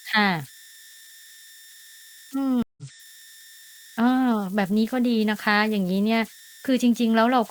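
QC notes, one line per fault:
throughout converter idle tones: a whistle near 2 kHz in pauses and grainy noise under quiet speech, about 25 dB down, from an undithered delta-sigma converter cycling through repeating bit patterns.
2.62–2.83 s stream reconnect: speech cuts to 152 ms of silence, then resumes roughly 150 ms further on, because the player reconnected and restarted its decoder mid-stream.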